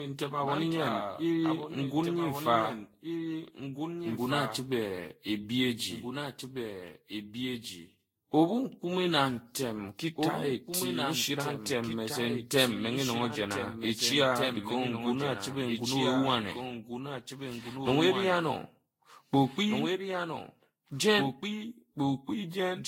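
Throughout, every stretch of speech is followed about two seconds later by a second full-band copy about 5 dB quieter: a doubled audio track, likely from the signal being captured twice. Also throughout, the speech sounds swirly, smeared and hollow, with blurred attacks and nothing above 16.7 kHz, pointing to generation loss, likely from around ten passes through Vorbis near 60 kbit/s.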